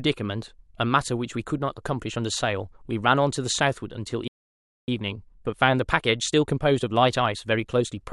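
A playback stall runs from 4.28 to 4.88 s: the speech cuts off mid-flow and the output falls silent for about 0.6 s before resuming. The likely cause is the player running out of buffered data, or its output thread being blocked, so nothing reached the output until it recovered.

Time-compressed catch-up follows from 4.88 to 7.88 s, as the player works off the backlog left by the stall. It trims small pieces and cross-fades across the joins, so the speech runs about 1.1 times faster at unchanged pitch, sounding hurried.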